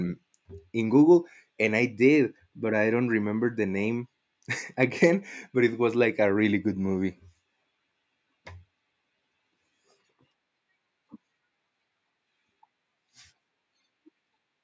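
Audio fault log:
No faults heard anywhere in this speech recording.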